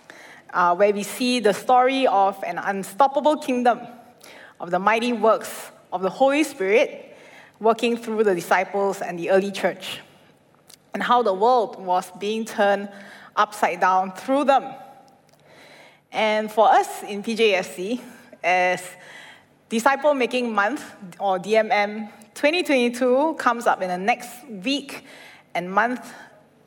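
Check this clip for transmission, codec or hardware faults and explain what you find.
Nothing stood out on listening to this clip.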